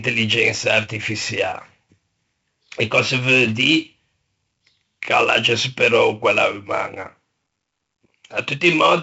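A gritty hiss rides on the speech from start to finish, rising and falling with its loudness, and the top end is dull, with nothing above about 7.7 kHz. This is heavy 4-bit ADPCM compression. Each sample is coded as a coarse 4-bit step from a predicted value, so the error becomes broadband noise that tracks the signal level, and sharp onsets are smeared where the step size cannot keep pace. The missing highs and the density of the grit fit 64 kbps at a 16 kHz sample rate.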